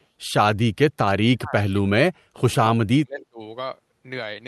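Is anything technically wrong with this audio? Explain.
Yes. Speech suppressed in double talk at 1.33–1.56, 1.75–1.85, 2.12–2.39 and 2.75–3.41 s: the talker's speech drops by around 25 to 40 dB, likely because an echo canceller suppressed it while both sides spoke. The waveform shows the envelope collapsing, and the spectrogram shows those stretches going dark.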